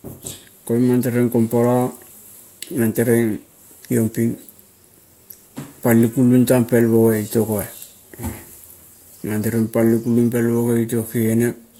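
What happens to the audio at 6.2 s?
Nothing goes wrong at 6.2 s; the speech continues intact through that moment.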